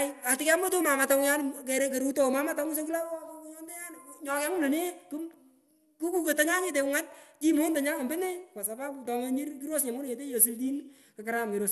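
Throughout the speech, nothing is heard above about 12.2 kHz, and what remains sounds dull, with a gurgling, granular texture as upper sub-bands drop in and out. This is likely MP2 compression, starved of bits, which fits a rate near 80 kbps.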